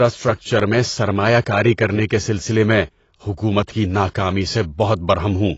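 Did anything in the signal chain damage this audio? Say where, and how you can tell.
Yes, at the codec stage. Throughout, the speech is dull and smeared, sibilants fizz and warble, and nothing sits above 7.6 kHz. This is likely AAC compression, consistent with low-bitrate AAC-LC near 24 kbps. A spectrogram shows a flat ceiling at 7.6 kHz.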